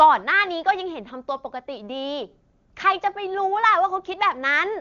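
No technical faults are audible.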